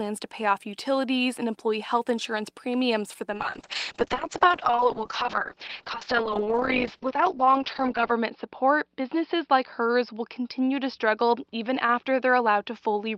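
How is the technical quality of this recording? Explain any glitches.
The recording starts clean but degrades partway through. At 3.35 s, just after "insurance premiums for the", a call bitrate drop sets in and lasts to the end. The call's bandwidth estimate fell, so the encoder was told to spend far fewer bits. The sound points to a fall from about 32 kbps to around 6 kbps, held at its lowest for about 4.8 s. Audio bandwidth shrinks from 20 kHz to 6 kHz. The speech turns muffled and coarse, with a rough, watery texture.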